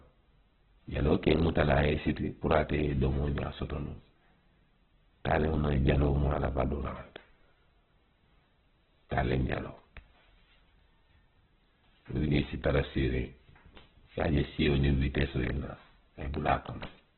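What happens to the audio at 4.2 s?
Opus compression runs through the whole clip, so at 4.2 s the speech is still carrying its heavy damage, which likely comes from a very low-rate Opus encode. Nothing survives above about 4.2 kHz, which fits a narrowband setting near 8 kbps. With so few bits, the encoder keeps each band's overall energy but fills in detail with folded or noise-like content, so the speech sounds muffled, rough and grainy rather than clean.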